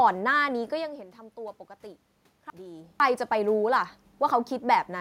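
Chunks out of order from 2.0 to 3.0 s: two 500 ms blocks play swapped, giving jumbled speech with hard joins at 2.0, 2.5 and 3.0 s, shown as vertical spectrogram lines.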